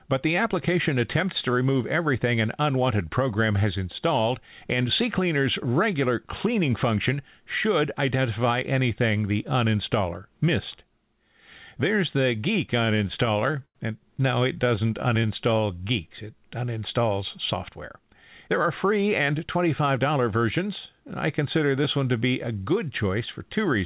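From 12.8 to 13.77 s there are repeated stalls (stutter). Packets arrived late or more slowly than they were played, so the jitter buffer kept running dry. Across ten gaps the receiver stretched the last sound to fill 188 ms, about 19% of that stretch, with the longest wait at 96 ms and faded out. Nothing is lost, but the speech drags and catches repeatedly.

Between 14.55 and 15.91 s come scattered short gaps. Around ten packets went missing or late, one at a time, and each small hole was patched by continuing the preceding sound. The patches are very short and add up to roughly a tenth of a second in total. The speech stays clear apart from brief ticks and tiny smears dotted through that passage.

Overlapping this, from 14.65 to 16.49 s, a jitter buffer slow-down is at work. With its reserve low, the buffer repeated single pitch periods and fragments of pauses to rebuild it, adding 107 ms. 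The speech plays at 95% speed with unchanged pitch. Sounds are slightly drawn out, and the repetitions can give a faint warble.

From 18.48 to 21.05 s the opposite happens in a jitter buffer speed-up. The buffer held more audio than its target, so it trimmed short pieces of one or a few pitch periods to cut the delay, removing roughly 150 ms in all. Playback runs at 106% at the same pitch, and the speech sounds a little hurried.

Throughout, the call path's narrow band, with nothing above 4 kHz, points to a G.711-type telephone codec.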